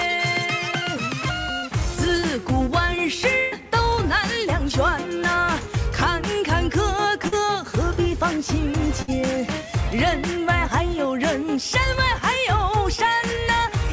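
Burst of packet loss at 1.58 to 1.69 s, 3.39 to 3.54 s and 9.02 to 9.10 s: runs of packets arrived too late or not at all, leaving about 40 ms, 120 ms and 60 ms of audio missing. The receiver stretched the last sound across each hole and faded it, so a held buzz or hiss replaces the real audio. When playback picks up again, it has jumped ahead, and the longest gap is the one around 3.4 s.

Short concealed packet loss at 7.28 to 7.34 s: about 40 ms never reached the decoder in time. The receiver filled it by carrying on from the preceding sound and then blended back into the real signal, leaving a brief smear or wobble. Throughout, nothing is heard above 8 kHz, which fits a wideband call codec such as G.722.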